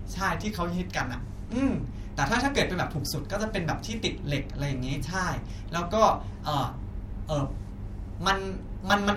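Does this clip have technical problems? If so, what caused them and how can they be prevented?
No, nothing in this speech recording gives any sign of a technical problem, so there's nothing here that needs fixing or preventing.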